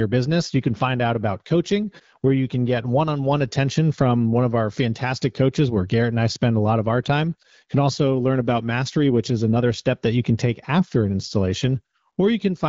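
Speech comes through the AMR wideband (HD Voice) codec at 12.65 kbit/s, a rate at which it keeps speech clear, and nothing in the signal stands out as a technical fault.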